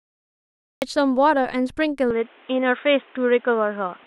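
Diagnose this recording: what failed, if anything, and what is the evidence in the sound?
The speech bursts in abruptly at 0.82 s out of dead digital silence, already partway through a sound, with no natural onset. This is a cut-off start at the capture or storage stage: recording began late, so the sound's real beginning was never written.

From 2.1 s to the end, the speech turns dull and boxy, with nothing above 3.8 kHz, no gap and no jump in level, and a new faint noise floor appears. The likely cause is the input switched to a poorer device at the driver level, with a narrower-band microphone taking over mid-take.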